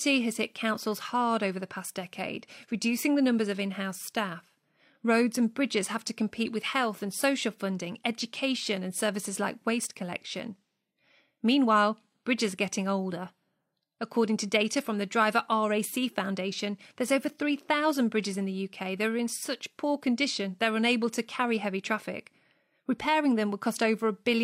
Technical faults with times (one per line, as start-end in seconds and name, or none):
none